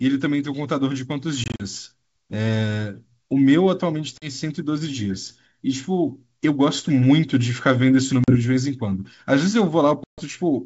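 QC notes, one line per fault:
1.44–1.61 s, 4.18–4.30 s, 8.24–8.36 s, 10.04–10.23 s: packet loss on an ADPCM call. Blocks of about 20 ms drop to silence with hard edges: scattered gaps totalling 100 ms in the first (longest 40 ms), 40 ms each in the middle two, and 140 ms in the last. The receiving ADPCM decoder's predictor and step size lose track of the sender's, so the G.722 wideband audio resumes with brief distortion that settles within tens of milliseconds.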